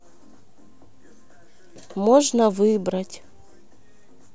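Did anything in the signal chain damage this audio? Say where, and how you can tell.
No, nothing in the chain left an audible mark on this speech recording at any stage.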